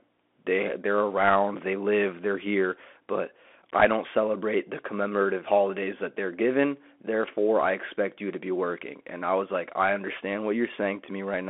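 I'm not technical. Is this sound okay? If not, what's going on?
No. The whole recording has gone through a Bluetooth CVSD headset codec, the basic phone-call mode of a wireless headset. It squeezes speech into a narrow band, roughly 250 Hz to 3.5 kHz, with nothing above about 3.8 kHz. That makes it sound thin and muffled, like an old phone call. The damage is plainly audible. S sounds come out scratchy, and a fine, gritty hiss sits under the speech from start to finish.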